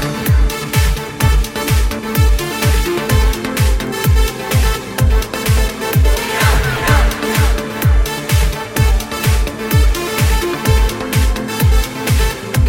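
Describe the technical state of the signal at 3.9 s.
At 3.87 s there is a bit error spike: a single sample whose value jumps by a power of two, as though one bit was flipped in memory or on a digital link, and then snaps straight back. It is heard as one sharp tick, unrelated to the surrounding sound. On the waveform it shows as an isolated one-sample needle reaching about -12 dBFS; on a spectrogram it is a thin vertical line spanning the whole frequency range.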